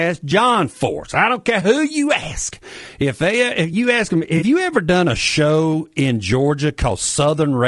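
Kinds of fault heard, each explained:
Low-delay AAC compression: A rough, grainy texture runs through the whole speech clip, with noise filling the gaps between voice harmonics and a thin, synthetic top band. That points to the likely cause: a low-delay codec of the AAC-ELD kind, at what sounds like about 32 kbps. Its short frames resolve pitch poorly, and the damage runs across the clip. Ordinary AAC shows less of this and tends instead toward pre-echo on sharp onsets.
AAC frame loss with concealment: Between about 4.37 and 4.43 s, just after "you ask them" and before "you ever done a", the sound turns briefly smeared and phasey. The decoder has patched over a gap of about 40 ms, which fits two missing frames, by reusing the last good spectrum with scrambled detail. It is too short to decay into silence. Unlike a dropout or click, there is no hard break, only a blurred, noisy patch.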